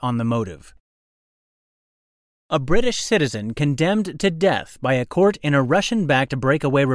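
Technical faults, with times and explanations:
Nothing in the speech stood out as a technical problem on listening.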